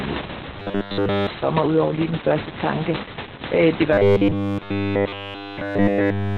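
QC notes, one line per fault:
Throughout: Opus voice compression. The coder is squeezed to a very low rate, which fits around 8 kbps narrowband SILK, so nothing lies above about 4 kHz and speech sounds muffled, hoarse and faintly robotic.
0.58–1.27 s and 3.93–6.37 s: robotic sound from repeated short buffers. Audio is likely arriving too seldom, so a 10 ms stretch loops over and over, imposing a rigid, metallic 100 Hz buzz. The first run ends just before "for mig udover lige", and the second starts right after "det var" and runs to the end.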